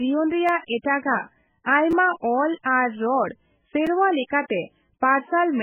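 Throughout the speech, the sound is watery and swirling, with the top end gone above 3.4 kHz and metallic chirps on sibilants. That is heavy MP3 compression damage, likely from a very low bitrate near 8 kbps, where the encoder cuts the treble and switches weak frequency lines on and off.

At 0.47 s and 1.91 s a brief buzzing click interrupts the speech, and a shorter click follows at 3.87 s. These are repeated buffers: a piece of about 5.8 ms, which fits a 256-sample buffer, replays three times at the first two points and once at the last, each with hard joins, dropping roughly 20 ms of new audio in the longer cases.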